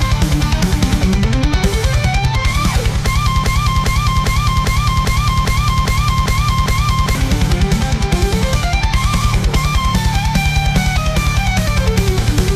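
A broken-record loop runs from 3.44 s to 7.15 s. A fragment of about 0.40 s repeats exactly, back to back, nine times. The sound does not move forward during this stretch. Whatever should have played in those seconds is missing, and normal playback resumes at 7.15 s. The likely cause is a stall in the player, encoder or stream. It kept resending the last piece of audio it held.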